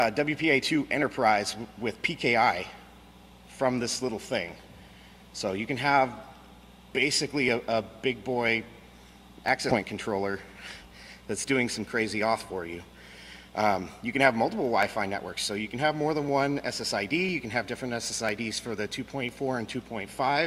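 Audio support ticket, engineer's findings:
Compressed frames skipped, 9.69 to 9.75 s. Decoder or file layer dropped several whole frames, either missing from the stream or rejected as corrupt. Playback jumps ahead roughly a tenth of a second, consistent with 20 ms frames. Check container integrity and decoder error handling.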